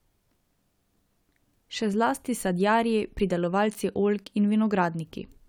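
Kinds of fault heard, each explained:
No technical faults can be heard in this speech recording. Nothing in the audio points to a problem in how it was captured or carried.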